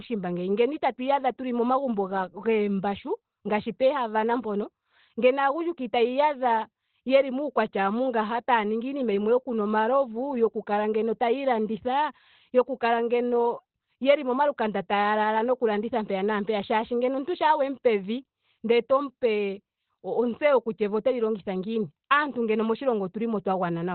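Heavy Opus compression runs through the whole of this speech clip, most likely at a very low bitrate, which fits something around 12 kbps. Nothing survives above 4.4 kHz, so it has that narrowband phone-line quality. The muffled, hoarse character points to the encoder working in its SILK speech mode, where it models the voice coarsely instead of coding the full spectrum. That's why it sounds dull and rough from start to finish.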